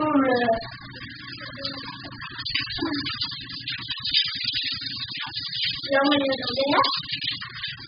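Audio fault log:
Throughout: AAC compression, likely at a very low rate such as 8 kbps, heavy damage, with nothing heard above 5 kHz. The dull, smeared sound with a warbling fizz sets it apart from a plain low-pass filter, which would stay clean below its cut-off.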